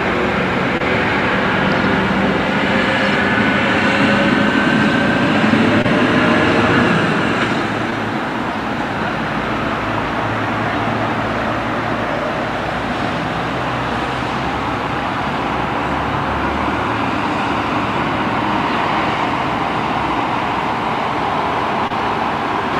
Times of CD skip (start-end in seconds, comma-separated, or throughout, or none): none